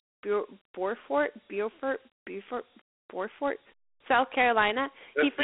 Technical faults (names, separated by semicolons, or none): Dialogic VOX ADPCM